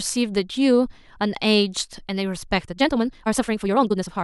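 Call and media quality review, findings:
Time-stretched section, 2.64 s to end of clip. Speech abruptly runs about 1.87x faster with pitch unchanged; rushed delivery. Likely cause: pitch-preserving time-compression dropping short segments to fit a target length. Spectrogram: harmonic spacing constant, but syllable blocks squeezed closer and narrower, with small vertical seams at splice points. Waveform: tighter syllable envelopes, shorter gaps, occasional abrupt joins.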